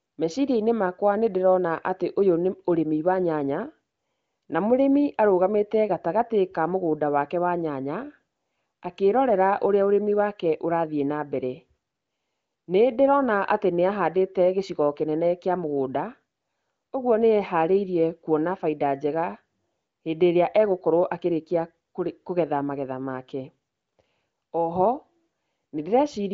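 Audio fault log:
No faults to log for this speech audio.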